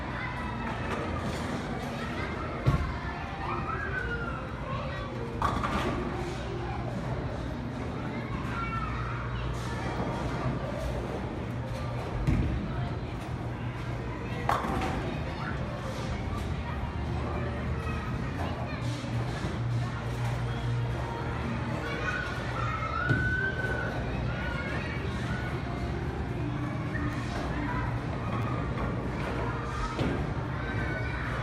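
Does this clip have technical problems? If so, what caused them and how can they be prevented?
Yes. There are short clicks at 4.49 s and 27.13 s, and a slightly longer buzzy tick from 28.42 to 28.44 s. Each is a repeated buffer: new audio did not reach the output in time, so the device replayed the piece it had just played, with a hard join at each repeat. The repeated piece sounds about 10 ms long, which fits a 10 ms buffer. It plays twice at the first two times and three times at 28.42 s. The later audio continues without a gap. A larger output buffer, or keeping the audio thread from being starved by other work, would prevent it.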